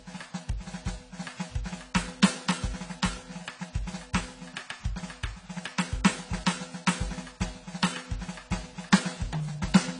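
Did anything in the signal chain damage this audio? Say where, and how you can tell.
Yes, at the codec stage, and it runs the whole way through the music. Nothing comes through above 10 kHz, so the top end is gone, and the damage is plainly audible: the sound is dull and smeared, with a warbly, fizzy texture on sustained material. That's likely AAC compression, probably AAC-LC at a low bitrate, something like 24 kbps. At that rate the encoder drops the cut-off and starves bands of bits, leaving gaps that it fills with noise.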